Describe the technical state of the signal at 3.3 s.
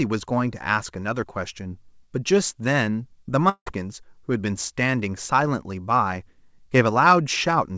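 Short concealed packet loss from 3.26 to 3.29 s: 20 ms of audio missed the decoder, which extended the preceding sound over the gap, leaving a brief smear.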